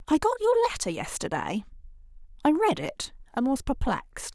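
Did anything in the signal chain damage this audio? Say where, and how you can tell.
No, nothing in the signal chain stood out as damaging this speech recording on listening.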